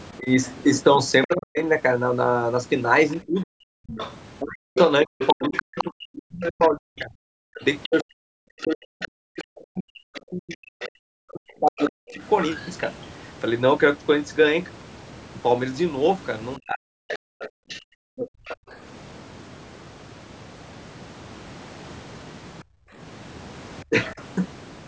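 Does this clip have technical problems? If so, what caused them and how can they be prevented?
Yes. From 0.18 to 12.22 s the speech repeatedly dips and breaks up, adding up to roughly seven seconds of loss, with the deepest drops around 40 dB. It happens again from 16.58 to 18.28 s (about a second in total) and briefly from 23.84 to 24.2 s (around 30 dB down). This is likely speech suppressed in double talk: both ends spoke at once, and the echo canceller, unable to separate the local talker from the loudspeaker echo, attenuated everything. Unlike a network dropout, the losses track the overlap rather than arriving as sudden clean gaps. Tuning the canceller for better double-talk detection, or using a headset, prevents it.

A second, quieter voice runs underneath from 1.24 to 12.71 s, roughly 10 dB below the main speech, and again from 17.08 to 18.56 s at roughly 15 dB below. That is likely the other side's voice leaking through: the loudspeaker's output reached the microphone and was not fully cancelled. 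It differs from crosstalk on a line because it coincides with the suppression episodes above, coming from the same struggling canceller. Headphones or a lower speaker volume stop it.

The room sound itself drops out between 17.67 and 18.7 s (about 35 dB down, for about 150 ms) and between 22.64 and 22.97 s (about 29 dB, about 300 ms), then returns. This is background gated by the echo canceller, which clamped the microphone while the loudspeaker played. It differs from double-talk suppression because it is the ambience that vanishes, so it is a brief hole in the noise floor rather than broken words. A gentler residual-echo suppressor, or comfort noise, keeps it from being audible. The lack of content above 8 kHz comes from the call's normal microphone processing and is not a fault.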